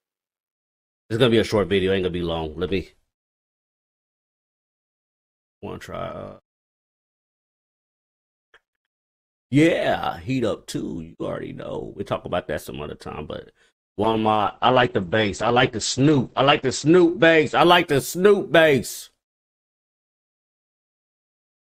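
From 14.04 to 18.67 s, a call bitrate drop starves the encoder. The sound points to a fall from about 48 to 9 kbps. Bandwidth shrinks from 20 kHz to 8 kHz, and for about 2.6 s the audio turns muffled, coarse and watery before recovering.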